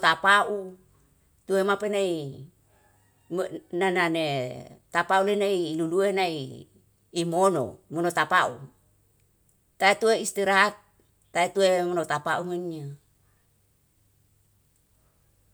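Sample clock jitter runs from 12.43 s to the end at 15.54 s. The converter's clock wanders by roughly 5 microseconds, so samples land slightly off time. The error, about 35 dB below the speech, grows with waveform slope and is heard as a rough hiss on loud, bright sounds.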